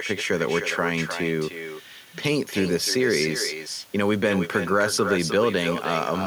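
A speech recording with echo with no canceller running through the whole clip. Every phrase returns about a third of a second later as a fainter copy, roughly 9 dB below the direct speech. The copy sounds thinner than the original. The far end is likely playing the call over a loudspeaker. Its microphone picks that sound up, and nothing subtracts it before it travels back across the network.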